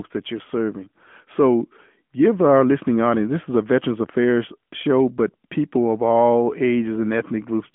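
Throughout the speech, an AMR narrowband mobile codec shapes the sound. Nothing passes above 3.6 kHz and the band sits near 200 Hz to 3.4 kHz. Unlike a plain telephone filter, its frame-by-frame vocal-tract model adds a plainly buzzy, synthetic edge, consistent with a mode near 10 kbps.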